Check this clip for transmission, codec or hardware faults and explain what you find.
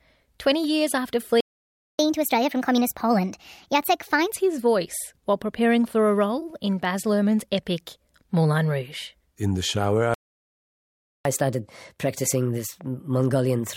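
Two playback stalls occur in this speech clip, each followed by a stretch of catch-up at higher speed.

Playback stall: at 1.41 s, just after "years after", the sound cuts to silence for 0.59 s, resuming at 1.99 s. A second stall runs from 10.14 s to 11.25 s, 1.11 s long, after "the shower". The likely cause is the player's buffer running dry or its audio thread being blocked, so nothing reaches the output until data flows again.

Catch-up at higher speed: from 1.99 s to 4.34 s, the player drains its backlog at 1.25 times normal speed by resampling, so the audio is both faster and raised by about four semitones. It returns to normal pitch and pace just before "his voice while preparing". The same accelerated, raised-pitch playback follows the second stall from 11.25 s through to the end of the clip.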